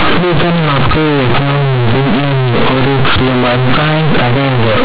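Throughout the clip, companded audio is read as linear: mu-law G.711 bytes from an 8 kHz telephone path are played as plain 8-bit samples without expansion, so every sign change swings across half the range, turning the speech into loud, buzzy distortion with heavy noise in pauses.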